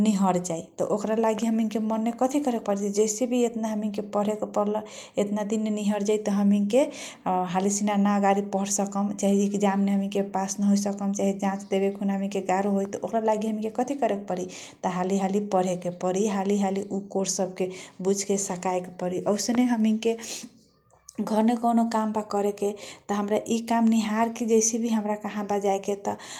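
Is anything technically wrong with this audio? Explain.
No, nothing is technically wrong with this audio.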